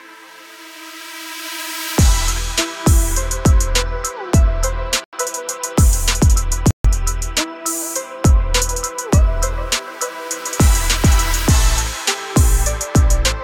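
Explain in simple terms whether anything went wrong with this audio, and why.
Two brief silences, at 5.04 s for 87 ms and at 6.71 s for 138 ms, sound like a Bluetooth stall, likely from wireless delays emptying the headphones' buffer. Unlike a skip, the sound resumes at or just after where it stopped.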